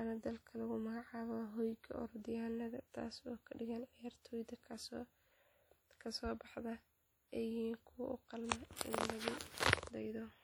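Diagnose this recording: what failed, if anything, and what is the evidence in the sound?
Likely WMA compression, throughout the speech, at the codec stage. The audio rings and sounds washy, with hiss that breathes with the signal. Long transform blocks spread quantisation noise across tens of milliseconds, and the plainly audible damage points to a bitrate near 48 kbps.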